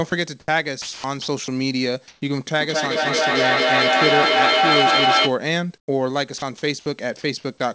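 Two brief cuts come first, at 0.10 to 0.12 s and at 0.40 to 0.48 s. Each is sound dropped by the voice detector: the sending side likely judged low-level speech to be background and stopped transmitting, and the receiver filled the gap with comfort noise. About 10 ms and 60 ms of speech are missing, replaced by 20 ms and 80 ms of flat noise. These are single dropouts with a clean return, which separates them from chopping.

From 0.82 to 1.48 s the speech is chopped by the voice detector. The detector likely toggled between sending and muting several times, so 320 ms in total is replaced by comfort noise. Syllable edges vanish. That repeated switching within one stretch is what distinguishes it from an isolated drop.

At 2.08 to 2.22 s the background itself is swapped for comfort noise. This is likely discontinuous transmission during a pause: 140 ms of steady, featureless noise stands in for a background about 41 dB below the loud speech. 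Here the fill is about 8 dB louder than the real background, so the pause sounds like a sudden patch of hiss. No speech is lost, unlike the dropouts.

From 2.6 to 5.38 s there is feedback echo between two devices. A second device in the same room replays the call, and its sound is picked up again by the first microphone. Each phrase returns about every fifth of a second, thinner and more metallic. At its loudest the echo sits about 4 dB above the direct speech, so the repeats pile up rather than fading. A single echo from one device would decay instead.

At 5.78 to 5.88 s comfort noise again replaces the background, which is about 45 dB below the loud speech. This time the fill is about 18 dB quieter than the real background, so the pause drops into near silence. Inside it, at 5.85 to 5.88 s, the onset is clipped by the voice detector. The detector was likely slow to reopen, and the first 30 ms of the next sound is missing, so it begins abruptly with no soft attack. 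Only the start is lost.

A last dropout, likely from the voice detector, falls at 6.38 to 6.42 s. About 30 ms of sound is likely lost and 40 ms of comfort noise fills the gap. Throughout the clip the G.722 call path at 64 kbps carries nothing above 8 kHz.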